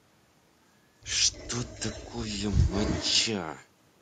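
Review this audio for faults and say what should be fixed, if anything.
Echo leak at 1.32–1.49, 1.65–2.12 and 2.33–3.25 s: speech repeats 0.31 s late, faint then nearly as loud, likely loudspeaker pickup a far-end echo canceller missed.

To prevent it, the far end should use a headset or retune its echo canceller to suppress a 0.31 s echo path.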